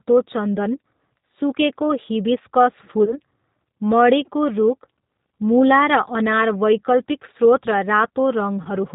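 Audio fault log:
throughout G.729 codec. The speech is band-limited, with nothing above 4 kHz. It sounds plainly rough and slightly synthetic, as if rebuilt from a vocal-tract filter, pitch predictor and sparse pulses. This fits the 8 kbit/s G.729A variant.
3.05–3.18 s and 8.63–8.69 s VoIP packet loss concealed by the speech codec. About 20 ms of audio is missing each time, consistent with a single dropped packet. The decoder stretches the last pitch and filter into a fading buzzy tone or coloured noise. The sound stays weakened briefly after each gap.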